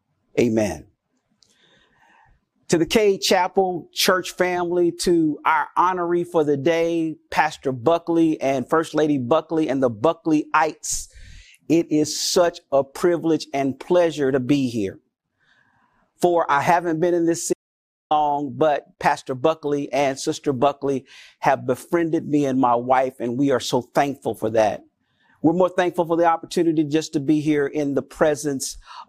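At 17.53 s, right after "haven't been in this", the speech drops out to silence for about 0.57 s, returning at 18.11 s. The gap is true silence rather than quiet: the room tone vanishes along with the voice, and the speech cuts off and resumes mid-flow. That pattern points to an audio dropout to silence, likely from the input being lost briefly while the recorder kept writing empty samples. Whatever was said in that half-second is unrecoverable.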